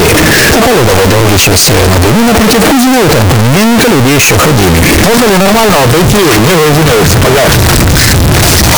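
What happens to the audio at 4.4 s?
At 4.4 s the audio is extremely loud and harsh, with the waveform flattened into a near-square shape at an almost fixed, high level and background noise pushed up to the level of the main sound, though its pitch can still be followed. This runs through the whole clip, not just that moment. It is likely a float read as integer fault: 32-bit float samples interpreted as 32-bit integers, so each value's sign and exponent bits dominate the result.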